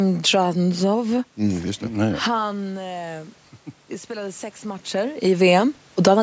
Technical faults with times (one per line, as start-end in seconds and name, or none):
1.80-5.29 automatic gain rising